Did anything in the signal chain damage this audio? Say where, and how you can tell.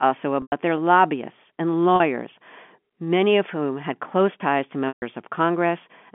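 Yes, at the network stage: a held, buzzy repeat at 0.42–0.52 s before "their lobbyists and", 1.96–2.00 s after it, and 4.88–5.02 s after "had close ties to". This is packet loss with pitch repetition. About 100, 40 and 140 ms were lost, which fits 20 ms packets. The concealer looped the last pitch cycle, and the two longer gaps faded toward silence before cross-fading back.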